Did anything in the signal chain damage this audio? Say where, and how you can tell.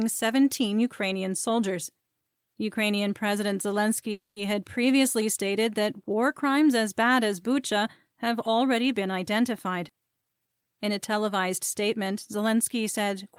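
Yes. From 4.11 to 4.38 s the sound stops, leaving a fading buzzy tail whose last 140 ms are silent, then resumes cleanly on "had previously stated that" with nothing lost. On a spectrogram it looks like smeared, decaying harmonics, then a blank gap. This is a call audio freeze, likely network packet delay starving the jitter buffer.

At 9.88 s there is a skip ahead: roughly a tenth of a second of audio is gone, and the two sides are joined by only about 10 ms of fill. The waveform shows an abrupt splice with no pause. This points to the network or jitter buffer discarding late or excess audio.

From 10.22 to 10.65 s a jitter buffer slow-down stretches the sound to 85% speed without shifting pitch, adding 71 ms through repeated pitch periods. The spectrogram shows elongated harmonic bands at unchanged spacing, and the waveform shows near-identical cycles repeating back to back.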